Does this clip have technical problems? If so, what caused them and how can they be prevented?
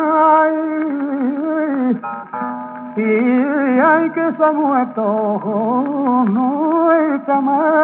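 No, there are no technical problems in this clip. It has passed through a call path whose narrowband telephone coding, consistent with G.711 mu-law, leaves nothing above 4 kHz.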